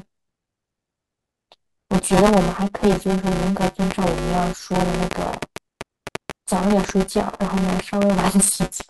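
Buffer tearing runs through the whole speech clip. The writing program and the playback hardware have slipped against each other, so roughly a third of every period is replaced by audio about 10 ms stale, with hard splices at each edge. Those splices repeat at 200 Hz, which fits a buffer period of about 5 ms. The result is a steady robotic buzz that rides on the speech and drops away whenever the signal stops.

From 3.64 s to 8.81 s a train of clicks sits over the audio. There are about thirty of them at an average rate near 5 per second, with uneven spacing. They peak well above the programme, roughly 15 dB over the signal. Each pulse has much the same shape and is audible both during speech and in the gaps as sharp ticking. The cause is likely interference from nearby equipment or a faulty connection or power supply.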